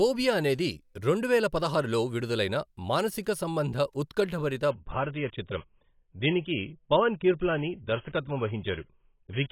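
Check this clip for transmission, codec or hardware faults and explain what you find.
One transmission fault. From 4.71 s to the end, an adaptive stream at a lower bitrate switches abruptly without a gap, consistent with a fall from about 96 to 16 kbit/s AAC. The speech turns dull and smeared, with nothing above 3.8 kHz.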